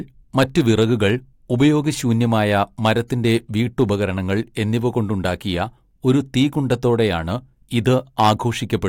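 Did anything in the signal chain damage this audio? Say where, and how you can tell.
Yes. The speech was driven past what a stage in the chain could pass, producing hard clipping: peaks were sliced flat at that stage's limit. It is audible from 0.38 to 1.08 s (about 6 dB over), 2.55 to 2.91 s (about 4 dB), 3.80 to 3.83 s (about 2 dB), 6.09 to 6.93 s (about 2 dB) and 7.77 to 8.32 s (about 8 dB). The flattened tops add high harmonics, heard as crackle on the milder passages and a harsh fuzz on the worst.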